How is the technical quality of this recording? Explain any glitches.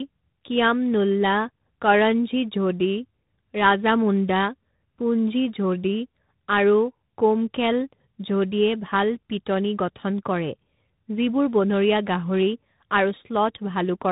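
The quality is poor throughout, limited by tandem speech coding across the whole clip. The sound suggests a chain like AMR-NB, then G.711 mu-law, then G.726 at 32 kbit/s, with two lossy speech coders in a row. Each stage re-encodes what the previous one already damaged, so errors pile up. The speech sounds muffled, rough and warbly. A spectrogram shows nothing above about 3.8 kHz and smeared, grainy harmonics.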